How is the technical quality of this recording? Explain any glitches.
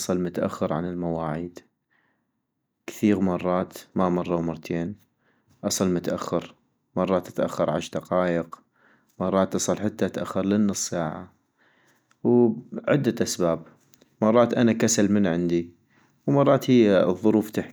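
The technical quality of the recording is sound, with no glitches to explain.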